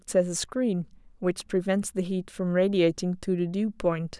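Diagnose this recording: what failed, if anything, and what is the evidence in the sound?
No fault detected in this recording.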